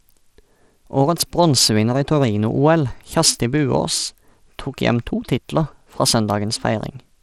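Throughout the speech, the treble is gritty and unstable, with a coarse noise riding on the sound, likely from Bluetooth SBC compression at a low bit pool, which fits about 96 kbps. A spectrogram shows flickering, patchy high bands and nothing above 17.3 kHz.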